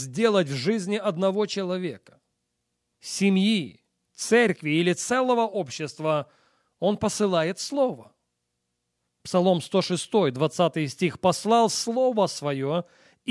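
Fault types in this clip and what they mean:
Nothing stood out on listening to this speech recording.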